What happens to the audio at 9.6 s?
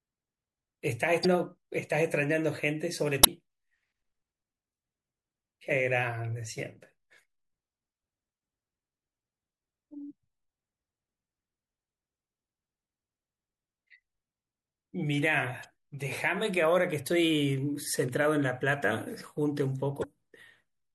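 At 9.6 s the speech sounds watery and swirly, with chirpy s sounds and smeared attacks, as it does across the whole clip. The likely cause is MP3 compression, which fits a bitrate near 64 kbps: starved of bits, the encoder drops weak frequency components that flicker between frames.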